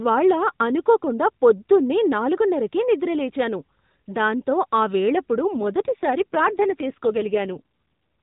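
From 5.55 to 7.94 s the speech turns buzzy and synthetic without any gap: an AMR rate drop, which fits a fall from 12.2 to 5.9 kbps.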